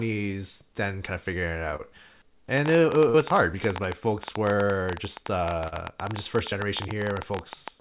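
Speech carried over a narrowband call path, with nothing above 4 kHz, which fits G.711 A-law at 64 kbps. Short concealed packet loss occurs at 1.76–1.81 s, just after "kind of figuring it", and again at 5.68–5.74 s and 6.50–6.53 s. Each time a few hundredths of a second went missing and the receiver bridged the gap by extending the preceding sound, heard as a brief smear. From 2.58 s to the end, a train of clicks arrives at an irregular pace of about 12.6 per second, standing well above the speech and audible in the pauses too. The likely cause is electrical interference or a faulty connection or power supply. At 3.09–3.16 s, a burst of packet loss removes about 40 ms of speech, and a 46 ms fading continuation of the last sound fills the gap before the audio resumes further on.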